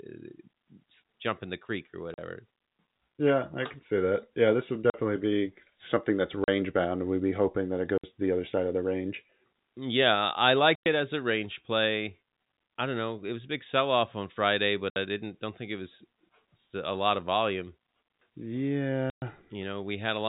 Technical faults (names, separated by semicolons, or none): packet loss filled with silence; digital wireless dropout